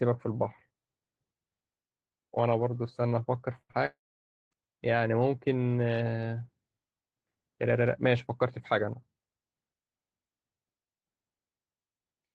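At 3.61 to 3.71 s there is a burst of packet loss: roughly 80 ms of speech failed to arrive, and the receiver stretched the preceding sound across the gap while lowering its level. It is heard as a short buzz or hiss that fades before the speech resumes with that stretch missing.

Immediately after, at 3.71 to 3.75 s, a short concealed packet loss removes about 20 ms more. The decoder extrapolates the last sound and crossfades back into the real signal, giving a brief smear or wobble where a short sound may drop out.

From 3.85 to 4.53 s the sound cuts out for about 660 ms, most likely a long network dropout. The concealment produces a fading continuation for roughly a tenth of a second, then about 550 ms of silence, and the audio returns further along with that portion lost. The surrounding audio, carried by a call codec whose high end stops near 12 kHz, is consistent with Opus at around 20 kbps.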